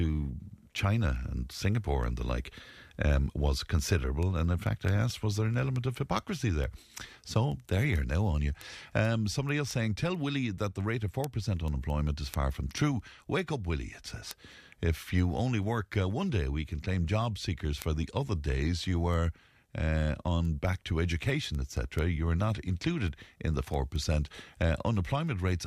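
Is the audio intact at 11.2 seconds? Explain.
No. Word clock ticks run from 0.28 s to 25.49 s. An unlocked clock, off by around 100 ppm, slips one sample. Sharp ticks come about every 0.2 s.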